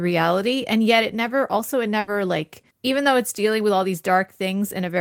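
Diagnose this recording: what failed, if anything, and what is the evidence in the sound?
Just after "it never also it", at 1.99 s, the speech freezes into a fading held sound for 80 ms, then jumps to "like even though it's" at 2.09 s, skipping 80 ms. This is a burst of packet loss on the network, concealed by stretching the last sound.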